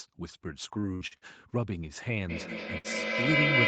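Speech heard through a call link band-limited to 8 kHz, consistent with Opus at around 32 kbps, has three faults. From 0.79 to 1.25 s, repeated packet loss gives a choppy, robotic sound: four short holes, the longest 57 ms, are patched by extending the previous sound, so about 40% of that stretch is synthetic. From 2.29 s to the end, feedback echo between two devices returns the speech roughly every 200 ms, building to about 7 dB above the direct speech, so the repeats pile up rather than decay. Inside that stretch, from 2.78 to 2.87 s, a burst of packet loss replaces the audio with a fading held continuation of the last sound, after which playback resumes with about 60 ms missing.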